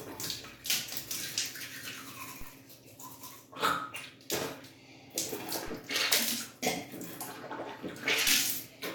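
At 2.41, 5.68 and 8.28 s, a DC step makes the waveform's zero line jump suddenly to a new level. Each jump gives a brief low thump. The offset then drains away, as a 5 Hz high-pass would, while the sounds continue unchanged.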